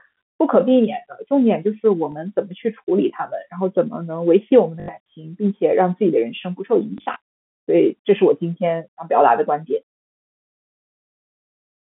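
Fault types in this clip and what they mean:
Packet loss with last packet repeated: missing stretches of speech were filled by replaying the previous chunk, giving short robotic stutters that buzz near 50 Hz, fitting 20 ms packets.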